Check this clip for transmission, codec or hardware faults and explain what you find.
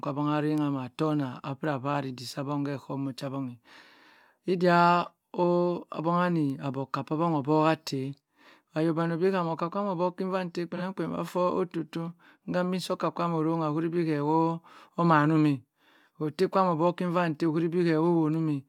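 One codec fault is present in this speech clip: an AAC frame loss with concealment between 10.76 and 10.82 s. About 43 ms of audio, consistent with a single missing frame, was not received, so the decoder rebuilt that stretch from the preceding good spectrum, reusing its energy with randomised phase. Because the gap is so short, there is no fade to silence, only a brief smeared, noisy or phasey patch before normal decoding resumes.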